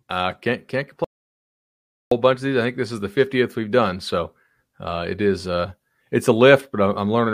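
An audio dropout to silence runs from 1.04 to 2.12 seconds, wiping out about 1.07 s of the speech. The input was most likely lost while the recording continued writing silence, so the sound stops abruptly mid-flow, leaves a dead gap with no room tone, then resumes just as suddenly.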